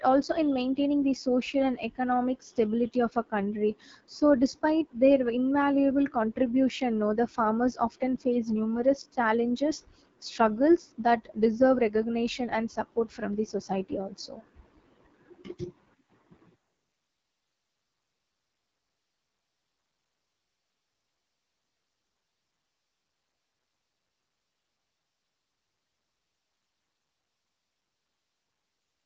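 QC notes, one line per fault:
Throughout: AMR wideband (HD Voice) codec. The speech sounds rough and raspy with nothing above 7.5 kHz. The band up to 6.4 kHz is rebuilt from a pulse-driven vocal tract model, here at a low rate of 8.85 kbit/s. Unlike narrowband telephone coding, the highs extend past 4 kHz, with only 6.4 to 7 kHz filled by shaped synthetic noise.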